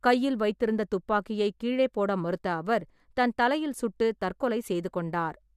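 No technical faults can be heard in this speech recording.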